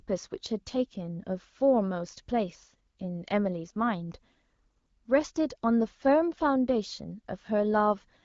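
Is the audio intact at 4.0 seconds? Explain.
Yes, the speech at 4.0 seconds is intact, with no dropout, glitch or other fault at that moment.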